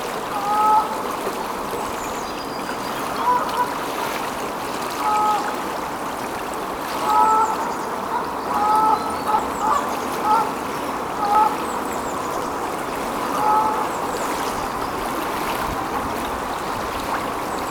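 Sudden jumps in the sound occur at 2.22, 5.55, 8.45, 9.39, 11.35, 14.17 and 15.96 s. No silence separates the joins. Each skips ahead about a tenth of a second, the last nearer 150 ms. This is likely a dropped buffer (overrun).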